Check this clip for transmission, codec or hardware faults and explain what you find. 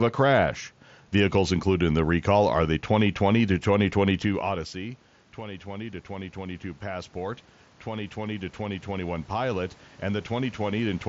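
One fault is audible, following a drop in level as the talker moves away from the microphone at around 4 s. From 4.26 s to 11.04 s, voice and room noise swell together slowly: automatic gain rising, as the gain control answers the roughly 16 dB quieter input by lifting its gain about 11 dB. The mSBC headset codec limits the audio to below 7.7 kHz throughout.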